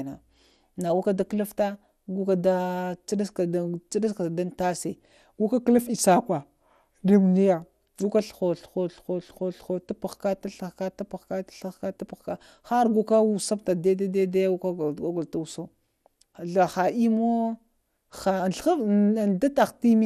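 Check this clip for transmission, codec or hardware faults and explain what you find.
One codec fault runs through the whole speech clip. It sounds dull and gurgling, with a granular roughness, and nothing at all above 14.4 kHz. This is likely MP2 compression at a low rate, about what 80 kbps gives: upper sub-bands are starved of bits and switched off, while the remaining bands are coarsely quantised.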